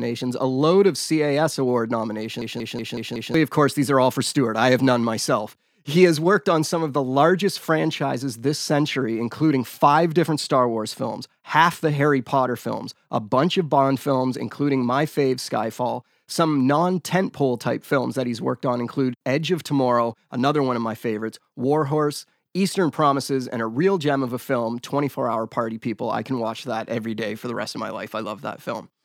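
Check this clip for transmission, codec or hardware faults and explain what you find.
There's one hardware fault: a system hang loop from 2.42 to 3.34 s, just before "of course these are". The playback side froze while the sound hardware kept replaying the same stretch of its ring buffer. The looped piece is about 186 ms long, which fits an 8192-sample buffer, and it repeats five times at roughly 5.4 Hz. You hear a choppy machine-gun stutter, and around a second of the real audio is gone.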